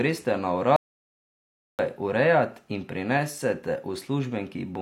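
At 0.76 s the speech cuts out abruptly. This is an audio dropout to silence. The gap runs to 1.79 s, about 1.03 s in all. It is dead silence, with no room tone or hiss underneath. The input was likely lost for a moment, through a disconnected device, a failed link or a stray mute, while the recording carried on writing silence. Speech returns mid-flow with "urejat in prinesete". Whatever was said in the gap is gone.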